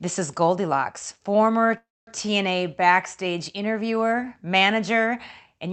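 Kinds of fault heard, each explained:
Call audio freeze: The likely cause is packets held up in transit until the jitter buffer ran dry, so the receiver stretched the last sound rather than play nothing. From 1.77 to 2.09 s the speech stops and a brief fading continuation gives way to about 0.23 s of silence. The speech then resumes exactly where it left off, losing nothing, and everything after arrives roughly 0.3 s later than it would have.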